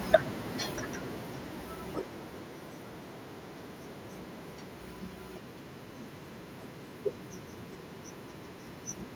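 From 0.05 s to 2.76 s the speech shows automatic gain falling: the gain control judged the input too loud and pulled its level down gradually, by about 8 dB. The voice starts loud, then sinks steadily, with the background noise dropping along with it.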